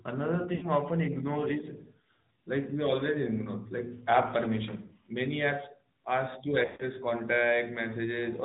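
Throughout, the AMR narrowband mobile codec cuts everything above 4 kHz, leaving a hard spectrogram ceiling and a plainly buzzy, synthetic tone that fits a mid-rate mode near 10 kbps. Lost AMR speech frames at 0.56–0.66 s and 6.66–6.86 s make the decoder repeat stale settings with falling gain. The sound smears and fades, the waveform envelope tapers, and the longer second gap nearly empties toward silence.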